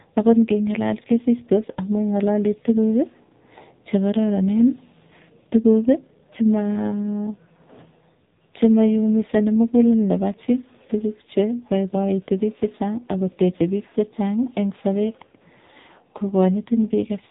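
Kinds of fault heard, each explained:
AMR narrowband mobile codec: Speech is rebuilt by a low-rate mobile vocal-tract model. Nothing above 3.8 kHz survives. The voice sounds heavily buzzy, which fits a 5.9 kbps mode.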